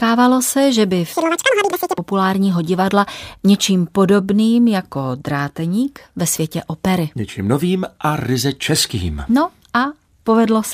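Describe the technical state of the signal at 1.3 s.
At 1.3 s the speech races at double speed and sits an octave (12 semitones) higher, from 1.13 to 1.98 s, right after "se že by". This is audio read two samples at a time (double speed): the reader took each pair of samples as one frame, as though there were two channels or each sample were twice as wide.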